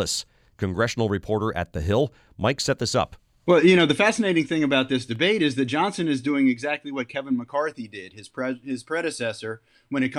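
Speech with no audible faults.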